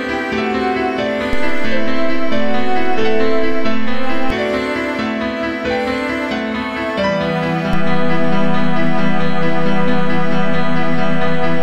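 At 1.33 s a DC step shifts the waveform's zero line by about -9 dBFS, giving a low thump. It steps back at 4.30 s with another thump, and a second step of about -10 dBFS arrives at 7.73 s and holds to the end. Unlike dropout clicks, the sound continues unchanged between thumps.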